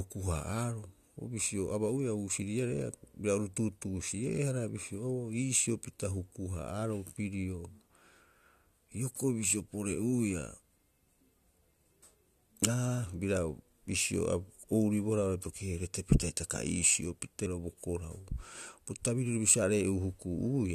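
Damaged data in the compressed stream hits the speech at 17.43 to 17.47 s. Bytes in that stretch of the file were corrupted, so the decoder misread the frames, lost sync and hunted for the next valid header, leaving a brief glitch about 40 ms long.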